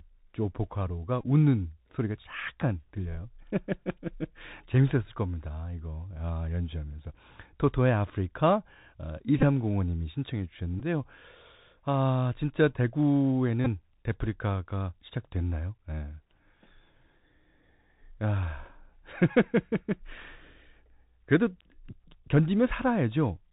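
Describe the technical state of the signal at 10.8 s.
A Bluetooth headset packet repeated fault runs from 10.80 to 10.82 s. When voice packets between headset and phone fail to arrive, the chip replays the bits of the last good packet instead. About 11 ms of sound is lost here, which fits roughly three lost packets, each replaced by a copy of the previous one. Because that copy recurs every 3.75 ms, the gap carries a brief buzzy flutter near 267 Hz rather than silence, then clean packets resume.

Underneath, the Bluetooth CVSD headset codec is active at this moment, as across the whole speech clip. It codes the waveform as one bit per sample at 64 kHz, each bit stepping the level up or down with an adaptive step size, so nothing above 4 kHz survives. The damage is plainly audible: a granular hiss sits under the speech, sibilants turn scratchy, and loud high-frequency sounds outrun the step and distort.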